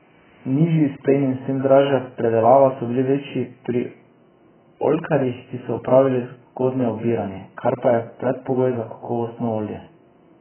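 It's a speech clip with heavy damage throughout: nothing above about 3.1 kHz, so it sounds dull, with a smeared, warbly fizz on sibilants. That's likely AAC compression, AAC-LC at a very low bitrate around 8 kbps, dropping the top end and coarsely quantising what's left.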